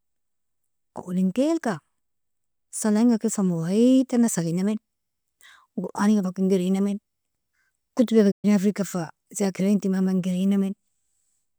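A playback stall occurs at 8.31 s, cutting the speech off mid-flow into silence for about 120 ms until 8.45 s, after which it carries on. The likely cause is the player running short of buffered data, or its output thread being briefly blocked.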